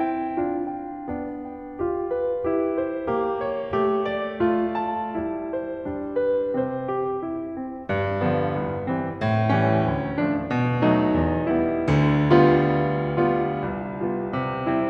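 A music recording with no technical faults to point to anywhere in the clip.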